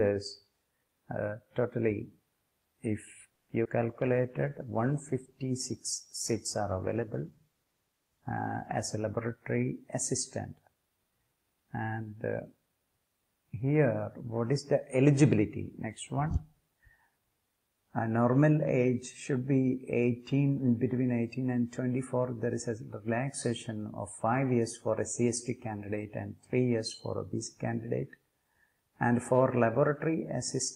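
The audio runs into a cluster of network faults in the first ten seconds. At 3.35 s a call audio freeze fills about 130 ms with a fading continuation of the preceding sound, without dropping into silence, before playback resumes where it left off. The likely cause is packets held up in transit, so the jitter buffer ran empty and the receiver extended the last audio. At 3.64 s a skip ahead jumps past something like 70 ms of material, joining the two sides almost directly with only a very short fill. Playback lurches forward because that stretch was discarded while later audio was already queued. From 3.86 to 4.51 s a jitter buffer slow-down stretches the sound to about 94% speed at unchanged pitch, adding roughly 47 ms through repeated pitch periods as the buffer rebuilds its reserve. Sounds are slightly drawn out and can warble a little. Overlapping this, from 3.89 to 9.04 s, a call bitrate drop makes the audio rough and muffled, with the high end cut away. 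The effect fits the encoder falling from around 64 to 16 kbps after the bandwidth estimate collapsed. Finally, from 9.04 to 10.14 s a jitter buffer speed-up runs the audio at about 104% speed at the same pitch, trimming around 50 ms in small pieces to shed the excess delay.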